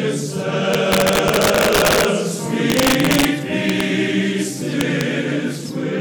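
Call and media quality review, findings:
Integer overflow, 0.74–2.05 s, 2.70–3.25 s, 3.70–3.81 s, 4.81–5.01 s. Violent cracks on loud peaks, far sharper than clipping. Probable gain or mixing stage without saturation: peaks pushed about 4, 3, 2 and 1 dB past full scale wrap to the opposite sign, each overshoot jumping across the full range. Worst and longest in the first span, lightest at 4.81 s.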